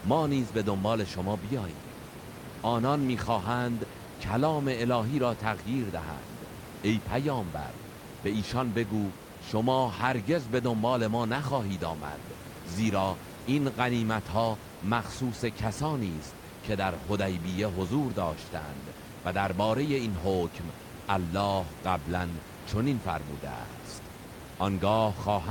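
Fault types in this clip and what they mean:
Nothing stood out on listening to the speech, with the room's background noise sitting about 13 dB below it.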